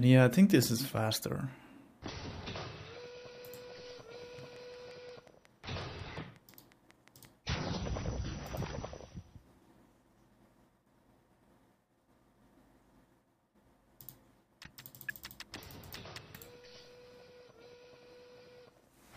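Something, likely interference from nearby equipment or a faulty connection, injects a train of clicks from 4.39 to 7.26 s: around fifteen similar pulses at a regular 5.6 per second, about as loud as the sound itself, heard as steady ticking over it.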